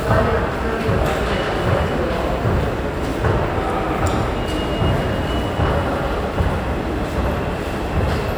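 A recording of everyday sounds, with no technical fault to be heard anywhere in it. There is nothing here that calls for a time or a cause.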